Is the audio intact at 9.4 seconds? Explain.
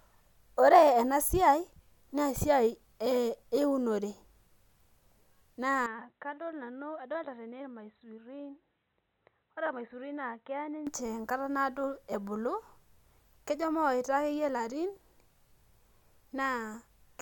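No. From 5.86 to 10.87 s the sound turns dull and quieter, with nothing above 4 kHz and faint new background noise, starting at "enkata naado ebulu". The likely cause is an input switched to a poorer device. Unlike a plain low-pass filter, the level and background noise change along with the tone.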